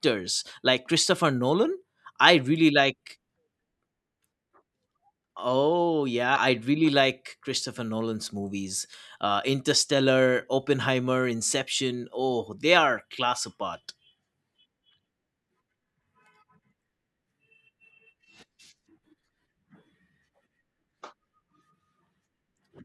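At 6.35 to 6.37 s, damaged data in the compressed stream makes the decoder misread a frame and resync, producing a brief glitch in the speech. A spectrogram shows a short vertical break; the waveform shows a discontinuity.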